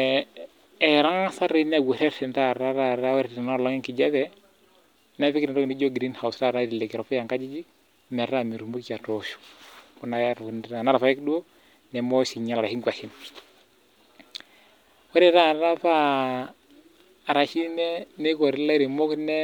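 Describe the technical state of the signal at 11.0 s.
At 11.0 s the speech signal is intact, with no audible dropout, clipping, distortion or other fault at that moment.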